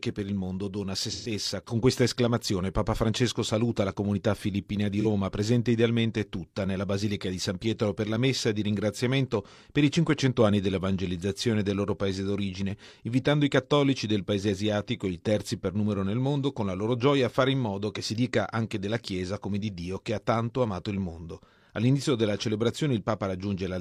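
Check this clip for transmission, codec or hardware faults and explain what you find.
The speech has two short dropouts from AAC frame loss with concealment, at 1.12 to 1.31 s and at 5.00 to 5.06 s. The gaps last about 128 ms and 43 ms, which fits three frames and one frame. In each gap the decoder rebuilt the missing audio from the last good spectrum with randomised phase, so it sounds like a brief smeared, noisy, phasey blur. On a spectrogram, harmonic striations give way to a frozen, hazy band. The waveform shows a noise-like stretch with no transients.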